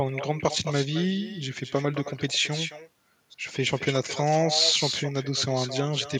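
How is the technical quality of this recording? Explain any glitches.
The recording carries a persistent fault: echo with no canceller, present from start to finish. Every phrase of speech is followed, roughly 200 ms later, by a second copy sitting about 9 dB below the original. The far end is playing the call through a loudspeaker, its microphone captures that playback, and no echo cancellation strips it out, so the talker's own signal returns after the network round trip. The copy sounds thinner.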